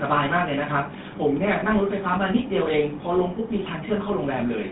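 GSM full-rate codec damage runs through the whole speech clip, and it is plainly audible. The codec rebuilds each stretch of voice from a vocal-tract filter driven by a sparse train of regularly spaced pulses, so the natural fine detail of the excitation is lost and the voice takes on a buzzy, gravelly roughness. The line band of about 150 Hz to 3.7 kHz leaves it thin and muffled, and the overall character points to the 13 kbps full-rate coder.

Lost GSM frames interrupt the audio from 1.60 to 1.63 s. The gap lasts about 20 ms, which fits a single missing frame. The decoder fills it by reusing the parameters of the last good frame. This brief concealment is heard as a short, rough, metallic ring where the voice should continue, and the voice then resumes.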